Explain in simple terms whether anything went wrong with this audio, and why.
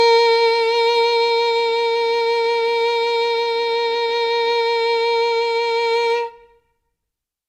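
Nothing went wrong with this music recording, as there are no dropouts, glitches, distortion or other technical faults anywhere in it.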